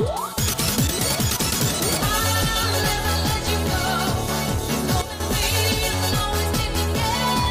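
At 5.02 s the sound and background drop by about 9 dB until 5.20 s: a sudden gain jump, likely an unramped gain step.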